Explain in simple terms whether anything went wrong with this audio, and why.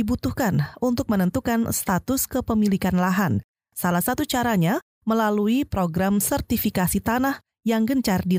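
Nothing went wrong here: the speech runs without any dropout, glitch or distortion.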